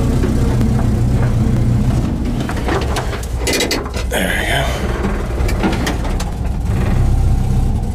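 Skips at 0.61, 1.57, 3.47, 4.42, 5.37, 6.33 and 7.28 s each drop roughly 50 ms, likely audio missing between chunks. They show as abrupt waveform splices and vertical spectrogram seams.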